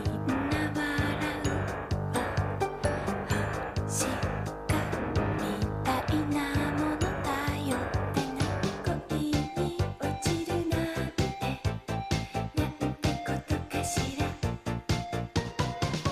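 Nothing is technically wrong with this audio.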